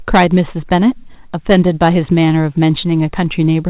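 From 0.14 to 0.88 s, hard clipping drives the speech about 9 dB past full scale, so its peaks are sheared flat into a harsh, buzzy fuzz rather than warm, rounded saturation.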